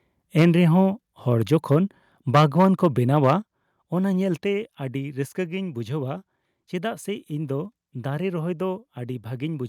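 At 0.39 to 0.46 s the loudest syllable turns harsh and crackly, and again from 2.34 to 2.85 s and at 3.25 to 3.31 s. This is microphone overload: the input level was likely set too high, so peaks overran the converter's ceiling by about 4 dB, about 7 dB and about 4 dB respectively, and their tops were sheared off. On a waveform the peaks sit flattened. In the first burst a fair share of samples is flattened, and only a small fraction in the later two. A spectrogram shows bright vertical smears of added harmonics reaching into the upper kHz range during each stretch.

At 0.42 s, in the middle of that first distorted peak, the whole signal drops by about 3 dB in one step. At 3.42 s, shortly after the third overload, it drops again by about 6 dB. These are microphone volume stepped down events, with the call software likely reacting to the clipping by cutting the device's input gain. The voice and the background both fall together and abruptly, with no fade. 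The waveform envelope shows a clean downward stair at each point, and the spectrogram dims evenly across all frequencies from that instant on.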